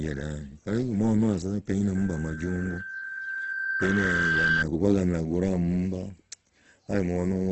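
Throughout the speech, the sound is grainy and rough, with nothing above 8.2 kHz. Fine detail is replaced by noisy fill rather than dropouts. This is likely Opus compression in its music mode at a low rate, around 12 kbps, heavily damaging the signal.

From 1.95 s to 4.65 s there is loudspeaker feedback squeal. The microphone is hearing its own loudspeaker, and the loop gain climbs past one at 1.6 kHz. That single tone swells gradually and ends a few dB louder than the speech before it stops.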